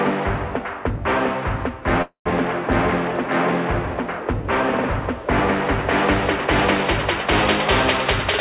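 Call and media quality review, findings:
Call audio freeze, 2.02–2.28 s: sound stalls into a fading buzz, roughly 110 ms silence, then resumes exactly where it stopped. Nothing lost; playback now 235 ms behind. Jitter buffer likely underran on delayed packets, concealment stretched the last sound. Band-limited throughout, nothing above 4 kHz, coding noise, which fits a G.711 A-law call path at 64 kbps.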